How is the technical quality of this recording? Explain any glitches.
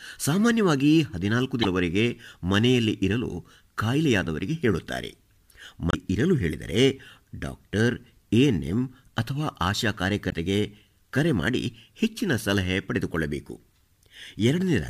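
Three brief glitches break up the speech, each caused by damaged data in a compressed stream, at 1.61–1.65 s, 5.89–5.95 s and 10.29–10.34 s. In each spot the decoder hits corrupted bytes, misreads or discards the affected frames, loses sync and scans forward for the next valid frame header. That leaves a short squawk or chirp of roughly 45–50 ms where garbled data briefly replaces the intended audio.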